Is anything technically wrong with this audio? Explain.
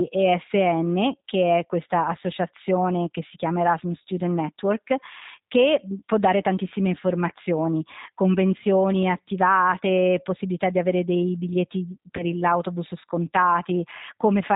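Yes, two problems are audible. Throughout the speech, the G.729 codec at 8 kbit/s is plainly audible. It models each 10 ms frame with a vocal tract filter, a pitch predictor and a few fixed pulses, so the voice sounds rough and slightly synthetic. A spectrogram shows a hard ceiling at 4 kHz with nothing above it, and harmonics look smeared rather than crisp. The waveform's fine detail is simplified.

From 12.17 to 12.24 s there is VoIP packet loss concealed by the speech codec. About 20 ms of audio is missing, which fits two lost 10 ms frames. The decoder filled the gap by extending its last pitch and filter settings with falling gain, so the sound is briefly stretched into a buzzy tone or coloured noise that fades. Because each frame builds on the one before, the voice stays weak or distorted for tens of milliseconds or more after about 12.24 s. A spectrogram shows a repeated, unchanging stretch there, and the waveform shows a decaying stretch.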